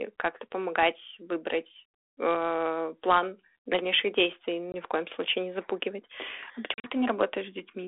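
At 4.72 s, between "э план дальнейших действий" and "в коем случае не", and again at 6.74 to 6.90 s, packet loss on the ADPCM call cuts 20 ms, then 80 ms of scattered gaps, as flat-line waveform holes and blank spectrogram columns. The decoder's predictor loses sync, so the sound resumes with brief distortion within the narrow telephone band.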